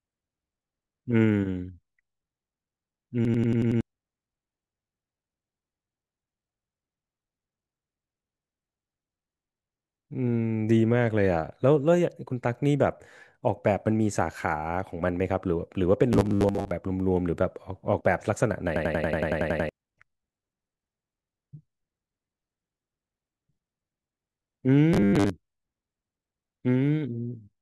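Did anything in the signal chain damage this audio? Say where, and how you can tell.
Yes. The driver or buffer stage failed twice with a system hang loop, at 3.25 to 3.81 s and at 18.76 to 19.69 s. In both, the speech locks into a machine-gun stutter repeating at 10.8 Hz. Each repeat lasts 92.88 ms, which fits a 4096-sample ring buffer. The system froze while the hardware kept replaying that buffer, 6 times and then 10 times. About half a second and then about a second of speech never arrive.

Robotic sound from repeated short buffers appears at 16.13 to 16.71 s and at 24.94 to 25.30 s. The speech turns into a rigid, metallic buzz at 100 Hz, though it still follows the speech's rough shape. A 100 Hz buzz means a 10 ms piece of audio being replayed over and over. Most of the real audio in those stretches is lost. The likely cause is buffer starvation at the driver: new data came too seldom, so the last short buffer was repeated to fill the gap.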